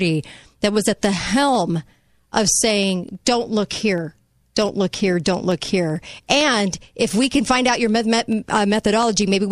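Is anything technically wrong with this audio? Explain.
Yes. Periodic USB or driver dropouts run from 1.36 to 9.41 s, starting after "that was at the". Every 64 ms the bus stalls and a tiny fraction of a millisecond is skipped, giving steady ticking under the speech.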